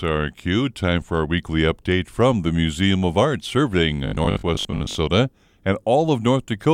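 From 4.07 to 4.97 s the speech goes robotic: a rigid metallic buzz at 50 Hz, likely from repeated short buffers of about 20 ms covering a good chunk of missing audio.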